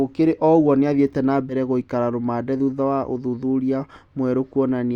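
A speech recording with a single case of compressed frames skipped, between 1.49 and 1.54 s, right after "ũgwo nĩathire" and before "gũikara rũmande thutha wa". Roughly one frame of audio, around 20 ms, which fits a 20 ms codec frame, was never decoded, so the sound jumps forward. Unlike a dropout, no silent gap is heard.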